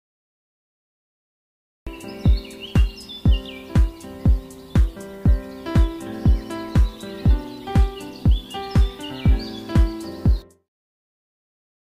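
For the first 1.87 s there is nothing but flat digital silence, and then the sound appears abruptly, already partway through, with no attack or fade-in leading up to it. This is a cut-off start: capture or streaming did not begin until 1.87 s, so whatever was happening before that point was never recorded, and the audio jumps straight from dead silence into the middle of an ongoing sound.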